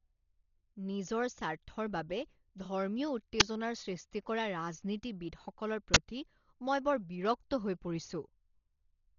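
The whole clip sounds dull. Nothing comes through above about 6.9 kHz, and there's a rough, fluttery noise hanging around the speech. That points to heavy Dolby Digital compression as the likely cause, at a very low bitrate, something like 32 kbps. At that rate the encoder narrows the band and leaves many frequency lines without any mantissa bits. The decoder then fills those gaps with dither noise, which produces that gritty flutter.

At 3.40 s, just before "সৃষ্টি কৰা ৰাজনীতিবিদসকলৰ", there's a short, loud crack of digital noise, roughly 11 ms long. That's an uninitialised buffer: a block was played before any audio had been written into it, so whatever was left in memory came out as samples. The length fits a 512-sample block. It happens again from 5.94 to 5.96 s, right after "সৃষ্টি কৰা ৰাজনীতিবিদসকলৰ", this time about 21 ms long, which suggests a 1024-sample block.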